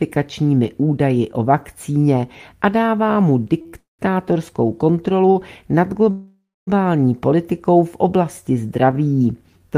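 Around 3.61 to 3.67 s and again 3.67 to 3.75 s, the sound hangs on itself with a faint buzz or dip, holding on for 37 ms and then 60 ms before carrying on. These are short stalls from a late packet: each packet was not there on time, the jitter buffer ran dry, and the receiver stretched the last sound until it arrived. Nothing is lost, but the timing slips.

From 3.79 to 4.01 s a buzzy or hissy tail fades into about 150 ms of silence, and the sound then resumes where it stopped, 198 ms late. This is a call audio freeze, likely caused by packets held up in transit that emptied the jitter buffer, so the receiver filled the wait rather than dropping anything.

At 5.31 to 5.37 s another short stall from a late packet holds the sound for 42 ms.

From 6.11 to 6.69 s a longer call audio freeze fades through about 260 ms of silence within a 560 ms gap. The sound then picks up from the same point, likely after delayed packets finally arrived.

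The last short stall from a late packet, at 8.91 to 8.95 s, is a 15 ms hold.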